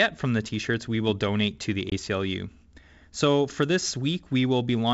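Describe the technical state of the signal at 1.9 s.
Packet loss on an ADPCM call strikes at 1.90 to 1.93 s, just after "will donate to the": about 20 ms of audio, a couple of packets' worth, drops out and is filled with silence. The receiving decoder's adaptive predictor and step size then disagree with the sender's, so after the sharp-edged gap the speech resumes slightly distorted, settling within a few tens of milliseconds on this G.722 wideband call.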